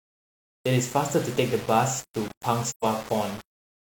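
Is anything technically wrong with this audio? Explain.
Yes, two faults are audible in this speech.

Low bit depth without dither runs through the whole clip. A coarse grain rides on the sound, roughly 20 dB below it, and it rises and falls with the speech, turning gritty and sputtery on quiet passages and tails. Undithered rounding is the likely cause, and the coarseness fits about 5-bit samples. Because the error tracks the signal instead of sitting underneath it, it sounds like a distortion rather than the steady, even hiss that dithered low resolution leaves.

AAC frame loss with muting occurs from 2.68 to 2.85 s. The decoder zeroed the missing spectral data, and the overlapping transform windows fade the sound down and back up around the gap, leaving a hole of about 128 ms, consistent with three lost frames. The edges are soft, which distinguishes it from a hard sample dropout or buffer underrun, where the waveform is cut abruptly and snaps.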